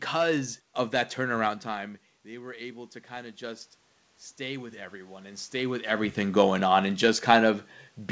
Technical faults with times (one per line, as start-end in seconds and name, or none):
1.64-3.75 automatic gain rising